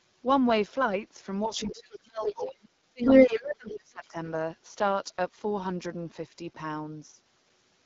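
Speech runs throughout with the rough, raspy texture of the AMR wideband (HD Voice) codec at a low rate, which fits its 8.85 kbit/s mode. Below 6.4 kHz the voice is rebuilt from a pulse-excited vocal tract model that has too few bits to track detail, so consonants and voicing turn gritty. The band above that is synthetic shaped noise, and there is no content above 7.5 kHz. From 1.46 to 4.17 s the talker's level repeatedly dips and breaks up, about 2 s of the span in total, with the deepest drop around 30 dB. This is speech suppressed in double talk, likely because the echo canceller could not tell the near talker from the far-end signal arriving at the same time and attenuated everything. Inside that window the other side's voice leaks through four times: 1.51 to 1.68 s at about 25 dB below the talker, 2.25 to 2.48 s at about 5 dB below, 3.02 to 3.37 s at about 10 dB above the talker, and 3.68 to 3.74 s at about 15 dB below. 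The likely cause is loudspeaker playback reaching the microphone and getting past an echo canceller that did not fully remove it. The loudest burst briefly dominates the near talker.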